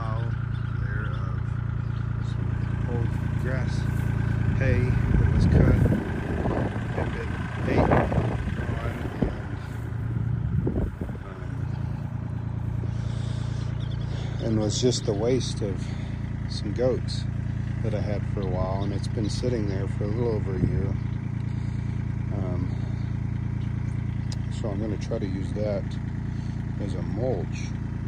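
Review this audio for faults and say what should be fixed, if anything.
No faults; nothing to fix.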